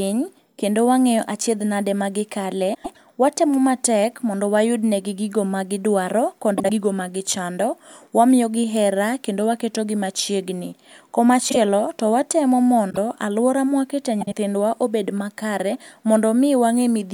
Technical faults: frames out of order

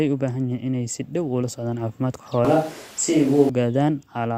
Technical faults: switch to a distant microphone

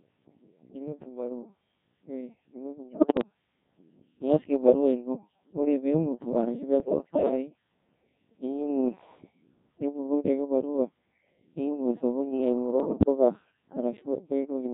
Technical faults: Codec 2 vocoder; bit errors on digital voice radio

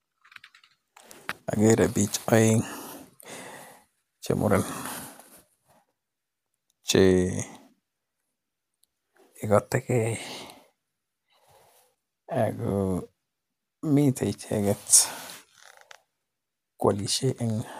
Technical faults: repeated buffer

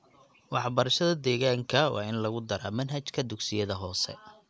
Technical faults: none

